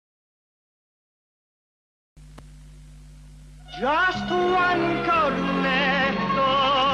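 A Bluetooth SBC bit pool drop sets in at 5.75 s and lasts to the end of the clip at 6.93 s. From that point the treble goes dull and a gritty, grainy noise rises under the audio, which fits the sender cutting the SBC bit pool from around 28 to around 11, roughly 90 kbps. With so few bits, the upper sub-bands are starved or dropped and the remaining bands are coarsely quantised, and the rate never recovers before the clip ends.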